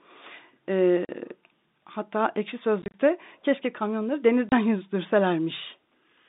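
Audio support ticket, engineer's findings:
Packet loss filled with silence, three dropouts in speech.
1.05–1.09 s: 40 ms hole, hard-edged. Jitter buffer/network inserting zeros for missing packets.
2.82–2.94 s, before "keşke kamyonları": 80 ms lost over 120 ms, longest gap 30 ms. Gap sizes point to 10 ms packets.
4.49–4.52 s, after "keşke kamyonları": 30 ms silent gap, hard edges.
Narrow G.711 phone band audible throughout, no codec fault.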